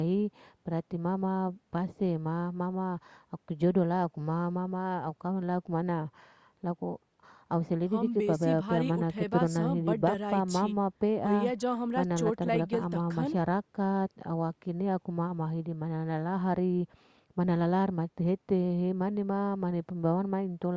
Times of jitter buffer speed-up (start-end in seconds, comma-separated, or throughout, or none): none